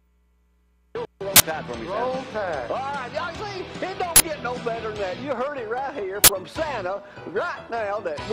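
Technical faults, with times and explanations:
1.36 to 1.40 s, 4.16 to 4.20 s and 6.24 to 6.28 s: uninitialised buffer. Three times, a 40 ms block plays out before any audio has been written into it, so leftover memory is read as samples. Each is heard as a short, loud burst of digital noise. A dropout would leave silence in that 40 ms slot and a click would be a single instant, but here the whole block is filled with harsh, unrelated noise.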